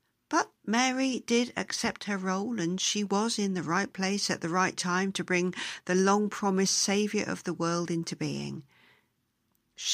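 A speech recording with no technical faults to report. Nothing in it needs a time or a cause attached.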